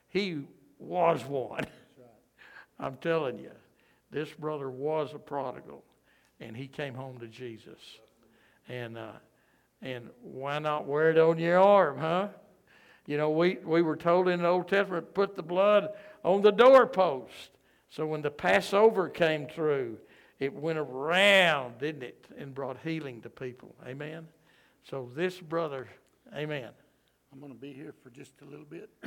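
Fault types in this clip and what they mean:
No faults are audible anywhere in this recording.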